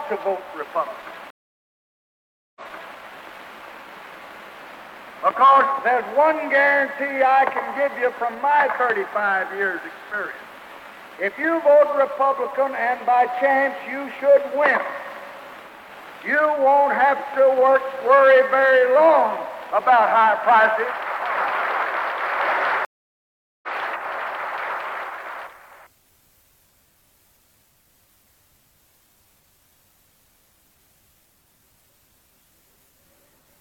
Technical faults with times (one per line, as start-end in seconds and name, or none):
1.30-2.97 stream reconnect
22.85-23.68 stream reconnect